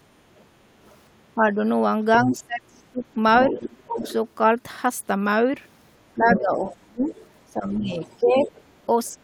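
A speech recording in which the echo canceller, likely struggling with loudspeaker pickup, lets the other side's voice leak through: a faint trace at 0.4 to 0.93 s, then stronger scraps at 3.39 to 4.13 s, 6.31 to 6.4 s (almost as loud as the talker), 7.07 to 7.29 s and 7.97 to 9.11 s. The canceller also likely mistook both sides talking at once for echo, causing speech suppressed in double talk. The talker dips by around 10 dB at 1.35 to 1.58 s and drops much further, by around 25 dB, in pieces across 2.25 to 4.05 s and 6.15 to 8.59 s.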